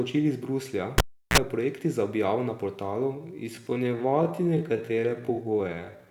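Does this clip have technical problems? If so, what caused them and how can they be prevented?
Yes, two. At 0.98 s there's the classic cable pulled and plugged in: a pop, roughly 345 ms of near silence with the line disconnected, then a short burst of 60 Hz mains buzz, around 39 ms, while only the plug tip was making contact, and a second pop as the speech comes back at 1.38 s. To avoid it, mute the channel or turn the gain down before touching any connector, and secure cables so nobody yanks them mid-take.

From 3.11 s to the end, the pace abruptly drops to about 0.61 times the earlier speed while the pitch stays put, and the speech drags. That's likely a time-stretched section, where software lengthened the audio to fill a duration and held the pitch by repeating short slices. To prevent it, fix timing by editing or re-recording rather than stretching, or keep any stretch small.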